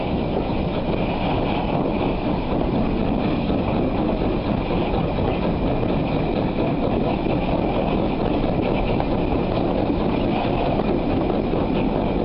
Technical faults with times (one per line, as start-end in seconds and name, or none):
none